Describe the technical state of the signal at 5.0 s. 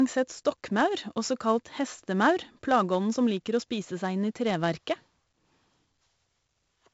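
At 5.0 s the speech carries 4-bit ADPCM compression, and that's not local to the moment; it runs through the whole clip. Each sample is coded as a coarse 4-bit step off a predicted value, so the error rides along with the level as a gritty hiss on every loud stretch, roughing up sharp onsets where the step size lags. The damage is heavy, and nothing sits above 7.7 kHz, which fits a 16 kHz rate at around 64 kbps and explains the dull top end.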